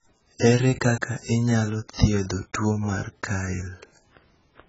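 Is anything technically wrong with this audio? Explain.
Yes, the speech has a likely AAC compression fault running through the whole clip. Nothing is present above about 7.7 kHz, and the remaining spectrum sounds dull and smeared, with a fizzy, warbling texture on sibilants and held vowels. Heavy damage of this kind fits a bitrate near 12 kbps, where the encoder drops the top band and leaves gaps between quantised frequency lines. A simple low-pass filter would also remove the highs, but it would not add this swirling, unstable grain.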